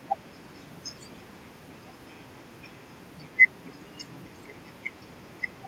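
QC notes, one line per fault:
No faults heard in this clip.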